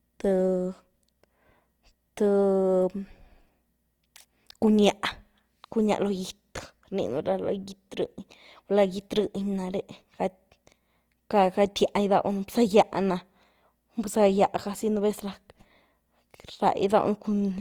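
Throughout, the speech sounds grainy and rough, with tonal parts turned noisy, which is likely Opus compression in its music mode, fitting a low bitrate around 24 kbps.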